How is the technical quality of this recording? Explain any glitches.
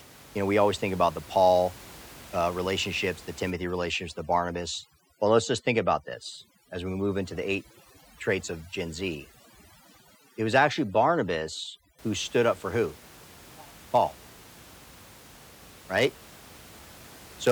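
The recording has one clear fault, over-aggressive noise removal; the room noise sits about 23 dB below the speech. From 3.50 to 11.99 s, overdone noise removal gates away bands near its noise estimate, leaving speech over near-silence with twinkling specks. On a spectrogram, that stretch shows a blanked background dotted with isolated bright flecks.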